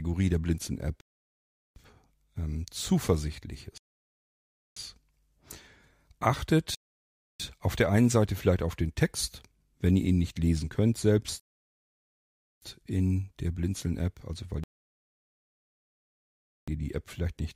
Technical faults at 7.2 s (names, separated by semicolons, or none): rebuffering stall